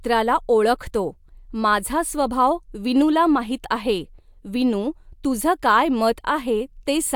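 No technical faults can be heard anywhere in the speech recording.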